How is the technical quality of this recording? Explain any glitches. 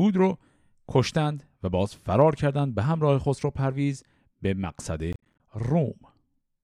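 One glitch stands out: processor overload crackle from 5.13 to 5.40 s, where around fifteen roughly 10 ms buffers miss their deadlines, leaving hard-edged silent gaps that tear the speech into gritty crackle, unlike a single clean dropout.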